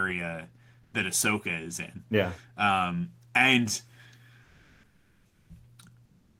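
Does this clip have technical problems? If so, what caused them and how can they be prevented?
Yes: comfort noise in place of the background at 0.83–0.93, 4.43–5.49 and 6.05–6.39 s. Speech pauses carry steady, featureless hiss about 5–6 dB quieter, not a gate's dead silence, likely from Opus DTX. Disabling DTX on the sender prevents it.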